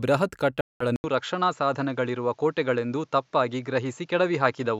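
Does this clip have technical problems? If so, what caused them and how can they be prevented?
Yes. There is a Bluetooth dropout from 0.61 to 0.84 s. The audio cuts to silence for about 0.2 s. It then resumes later in the speech, as if it had kept playing. Audio packets were likely lost or late on the wireless link. Keeping the headphones close to the source, away from interference, prevents this.

At 0.96 s the input switched to a poorer device. A silence of 80 ms marks the switch. From then to the end, nothing is heard above 7.6 kHz, so the speech sounds duller. A new background noise sits roughly 45 dB below it. The loudness stays about the same. The system likely changed microphones mid-recording. Fixing the input device in the system settings prevents this.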